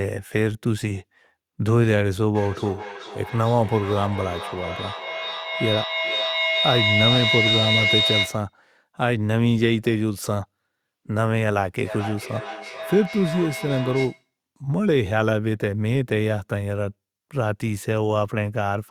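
A speech recording with two faults. From 2.35 to 8.55 s a feedback howl rises to about the level of the speech, a piercing tone around 4 kHz that pulses roughly every 400 ms. Two devices in the same room are on one call, and the loop from microphone to loudspeaker and back adds gain on each pass, so the sound grows and narrows to the pitch the loop favours. From 11.84 to 14.3 s there is feedback echo between two devices: the speech comes back at a fixed interval of about 400 ms, peaking around 10 dB below the speech. One device plays what the other's microphone sent, that microphone picks it up again, and neither echo canceller removes audio played by the other device.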